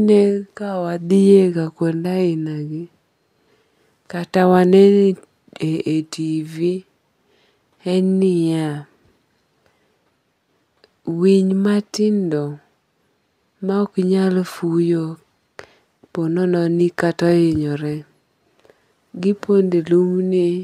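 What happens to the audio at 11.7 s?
Nothing goes wrong at 11.7 s; the speech continues intact through that moment with no dropout, click or distortion.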